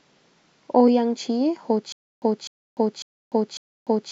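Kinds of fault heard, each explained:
stutter with silent gaps: the stream likely stalled, replaying its last fragment at each retry. A 0.25 s burst recurs every 0.55 s, separated by 0.3 s of digital silence.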